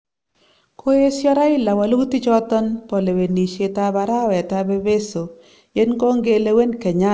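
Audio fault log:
0.00–0.41 s comfort noise in place of the background: the opening pause is a flat, featureless hiss about 6 dB quieter than the room tone that follows, likely synthesised by the receiver while the sender paused. A spectrogram shows smooth, detail-free texture, and the waveform shows an even, low band.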